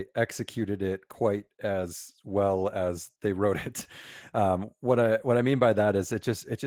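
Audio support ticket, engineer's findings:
Opus voice compression, throughout the speech clip. Plainly audible codec damage: hoarse, slightly robotic voice texture. Probable component: Opus encoder in hybrid mode, with SILK linear prediction below 8 kHz and a CELT layer on top. Excitation coded coarsely, which fits roughly 16 kbps. Band still reaches fullband, so not muffled by narrowing. Framing consistent with 20 ms frames.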